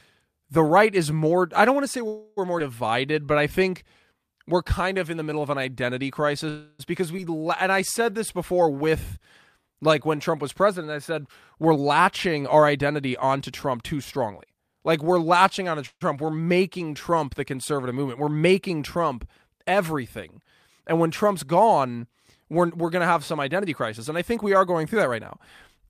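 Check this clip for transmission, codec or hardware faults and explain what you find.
The speech shows several transmission faults typical of a network call: three freezes, two skips, a stretch of slow-down and two stretches of speed-up.

Call audio freeze at 2.07 to 2.39 s, just after "don't want to say", at 6.49 to 6.81 s, and at 15.87 to 16.03 s, after "we're latching onto". The likely cause is packets held up in transit, leaving the jitter buffer empty. The receiver extends the last sound as a fading buzz for 294 ms and 299 ms in the first two freezes, and for 140 ms in the third, which ends in 40 ms of silence. Speech then resumes where it stopped, with nothing lost.

Skip ahead at 2.59 to 2.62 s and at 7.17 to 7.20 s. Here audio was discarded, in transit or by an overflowing jitter buffer, while later packets were already waiting. Playback jumps forward over roughly a tenth of a second at the first point and about a fifth of a second at the second. 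Only a few milliseconds of fill bridge each join, so the speech on either side is spliced almost directly.

Jitter buffer slow-down from 2.90 to 10.00 s. The buffer was short, so the receiver repeated individual pitch periods and fragments of pauses to build a reserve, adding 288 ms in total. The speech runs at 96% speed with unchanged pitch, and sounds come out slightly drawn out. This stretch contains the freeze at 6.49 s and the skip at 7.17 s.

Jitter buffer speed-up from 11.63 to 14.82 s, after "was president I said", and from 22.44 s to the end. Here the buffer held more audio than its target, so the receiver trimmed short runs of pitch periods, roughly 0.3 s in each stretch. The speech plays at 108% and 107% speed respectively, with pitch held steady, and sounds hurried.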